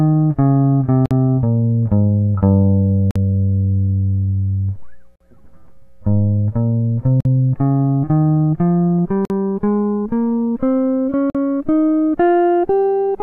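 A music clip interrupted by a gap at a join of encoded pieces six times, at 1.06, 3.11, 5.16, 7.20, 9.25 and 11.30 s, repeating every 2 s. Each dropout lasts about 48 ms (51 ms for the first) before the music resumes where it stopped, pointing to separately encoded segments joined without removing the encoder's start delay and end padding. A waveform shows flat notches, and a spectrogram shows thin blank vertical stripes across all frequencies with slightly softened edges.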